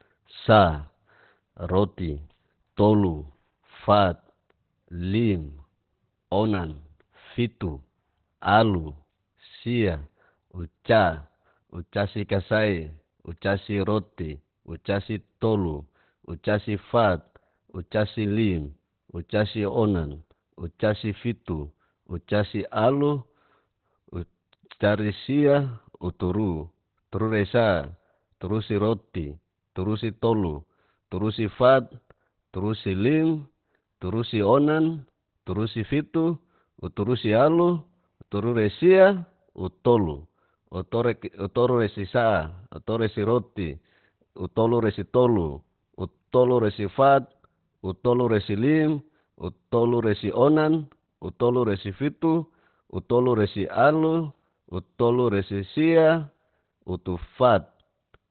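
From start to finish the speech sounds muffled and hoarse, with nothing above 4.3 kHz. A spectrogram shows a flat ceiling there. This is likely heavy Opus compression in its narrowband speech mode, fitting a bitrate near 12 kbps.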